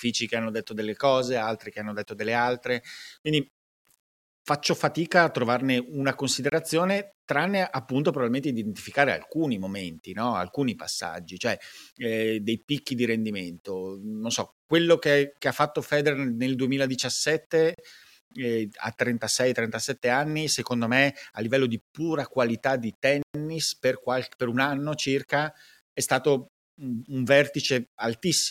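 Throughout the speech, quiet passages sound grainy and rough. The grit follows the level and fades into sputtering near silence. The likely cause is low bit depth without dither, with plain rounding, which fits about 10 bits. The error sits roughly 40 dB below the signal.

At 6.50 to 6.52 s, a block of digital silence cuts in for 24 ms. At 17.74 to 17.78 s, another lasts 40 ms. At 23.22 to 23.34 s, a 120 ms hole opens. Each drops abruptly to silence and returns.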